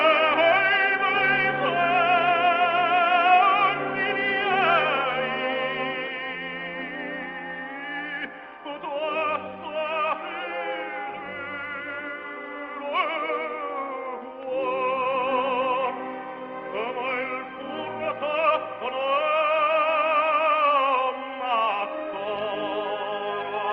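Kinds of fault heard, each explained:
No faults detected.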